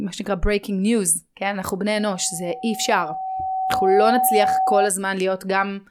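Loudspeaker feedback squeal runs from 1.97 to 4.92 s in this speech clip: a 757 Hz tone swells over about two seconds to roughly 5 dB above the speech, as the microphone re-amplifies its own loudspeaker.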